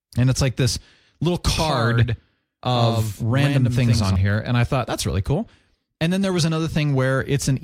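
From 1.58 s to 4.16 s, right after "it's like this little", the speech carries a doubled audio track. A second copy of the same audio runs about a tenth of a second behind. It is a little quieter, roughly 5 dB down, and fully bright. It adds no reverb or room tone. The copy switches on and off abruptly. This likely comes from the signal being captured twice, once through a slower path.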